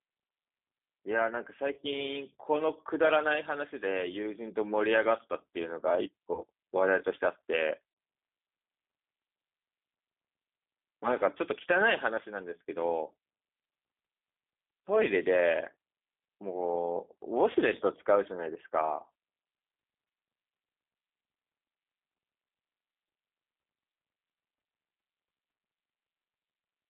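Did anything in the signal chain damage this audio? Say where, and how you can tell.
Yes. Throughout, the speech sounds rough and slightly synthetic, confined to a telephone band of roughly 250 Hz to 3.5 kHz with nothing above. That fits the G.729 codec, which rebuilds each 10 ms frame from a vocal-tract filter, pitch predictor and a few pulses. The low bitrate, consistent with an 8 kbit/s stream, leaves plainly audible coding damage.

At 1.74 to 1.80 s, 6.34 to 6.43 s, 7.91 to 7.97 s and 17.52 to 17.56 s, the speech smears into a brief stretched sound that fades, then recovers weakly. This is VoIP packet loss concealed by the speech codec. The network dropped audio, about 30 ms each time and 60 ms at 7.9 s, and the decoder extrapolated from its last pitch and filter.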